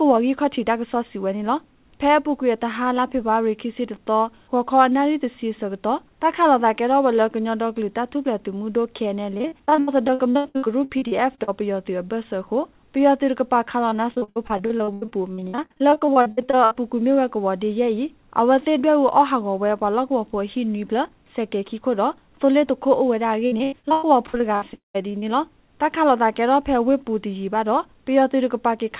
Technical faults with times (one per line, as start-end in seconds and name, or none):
9.34-11.49 repeated packet loss (robotic sound)
13.89-16.76 repeated packet loss (robotic sound)
23.46-24.63 repeated packet loss (robotic sound)
24.73-24.96 long network dropout
25.02-25.24 short concealed packet loss